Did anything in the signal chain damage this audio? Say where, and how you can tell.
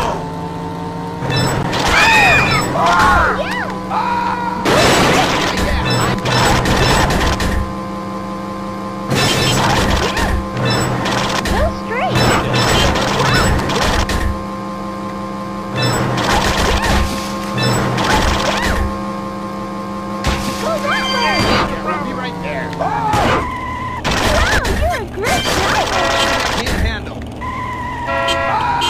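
Yes: gaps between stream segments at the playback stage. Hard-edged silent holes of 3 to 15 ms at 1.63, 3.64, 13.63, 15.63 and 21.67 s fall on 2-second segment boundaries where timestamps leave unfilled time.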